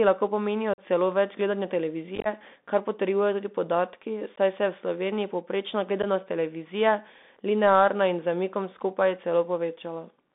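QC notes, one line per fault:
Throughout: Bluetooth CVSD headset codec. The speech sits in a narrow 200 Hz to 3.6 kHz line band with plainly audible codec damage: one-bit delta steps lag loud high sounds, s sounds turn scratchy, and granular hiss underlies everything. On a spectrogram nothing appears above about 3.6 kHz, with a speckled noise floor.
0.74–0.80 s, 2.16–2.27 s, 4.36–4.38 s and 6.02–6.05 s: unconcealed Bluetooth headset packet loss. Short voice packets between headset and phone went missing and nothing filled them, leaving abrupt holes of 45 ms, 64 ms scattered over about 98 ms (longest run 22.5 ms), 15 ms and 11 ms. The gaps come just before "celo več gledanja", between that phrase and "kar potrjujejo tudi podatki", and just before "televizije linearna". The second event sounds like rough chopping rather than one dropout. The waveform shows flat or near-flat stretches with sharp edges, and the spectrogram shows thin vertical blank bands.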